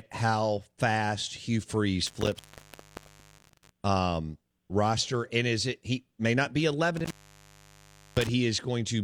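At 2.07 s the speech drops out through an intermittent contact, returning at 3.70 s; a second dropout of the same kind runs from 6.97 s to 8.29 s. In each case a loose cable or plug connection momentarily opens, breaking the signal path for roughly 0.99 s and 1.06 s respectively. The edges crackle as the contact breaks and remakes, and the open stretches leave faint hiss in place of the signal.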